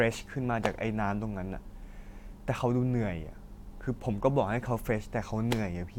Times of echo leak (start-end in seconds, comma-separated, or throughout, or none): none